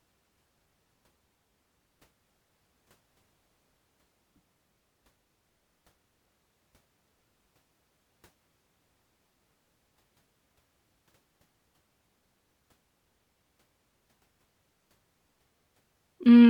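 Recorded speech, with no technical fault to be heard anywhere in it. There are no dropouts, level jumps or other disturbances at any point.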